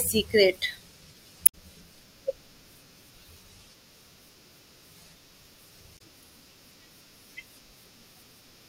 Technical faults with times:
1.43-1.55 damaged data in a compressed stream
5.94-6.01 damaged data in a compressed stream

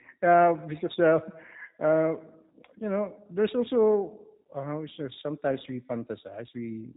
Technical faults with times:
0.00-6.96 G.729 codec

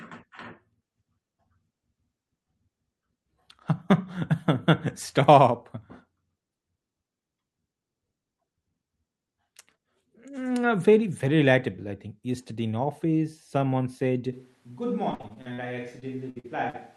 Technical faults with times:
14.33-16.96 switch to a distant microphone
15.11-15.60 repeated packet loss (robotic sound)
16.00-16.76 repeated packet loss (robotic sound)

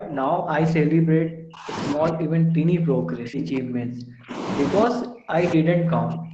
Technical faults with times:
0.00-4.46 speech suppressed in double talk
4.84-6.33 speech suppressed in double talk

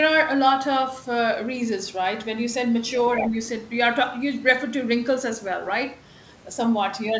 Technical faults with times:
3.16-3.35 speech suppressed in double talk
3.20-3.28 other side's voice leaking through

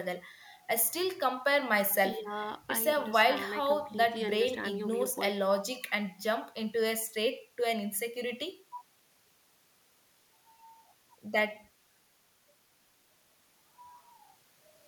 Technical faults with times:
none

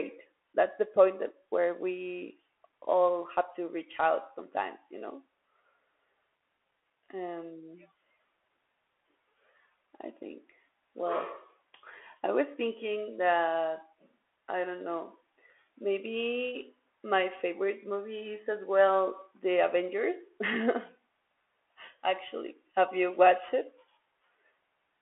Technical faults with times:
0.00-25.01 Bluetooth CVSD headset codec

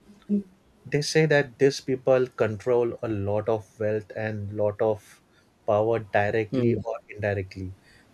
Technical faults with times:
0.02-0.18 echo leak
6.80-7.18 speech suppressed in double talk

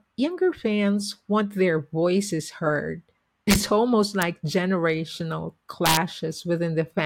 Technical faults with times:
3.51-3.56 integer overflow
4.22 integer overflow
5.86-5.97 integer overflow

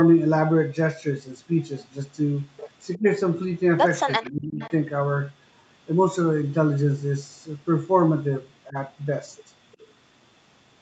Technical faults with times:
2.94-2.98 echo leak
2.97-3.04 speech suppressed in double talk
4.19-4.62 speech suppressed in double talk
4.23-4.31 echo leak
4.61-4.71 echo leak
8.69-8.76 speech suppressed in double talk
9.73-9.86 echo leak

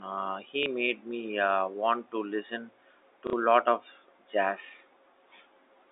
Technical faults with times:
0.63-0.66 packet loss with last packet repeated
3.27-3.33 packet loss with last packet repeated

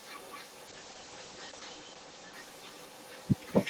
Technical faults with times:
0.00-3.69 echo with no canceller
0.68-3.33 call bitrate drop

